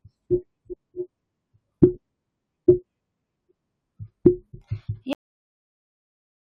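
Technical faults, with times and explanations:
5.13 s to end, cut-off end: the speech stops abruptly mid-sound at 5.13 s and falls straight to digital silence with no natural decay. The final buffers were never written or played out, so the remaining 1.3 s holds nothing.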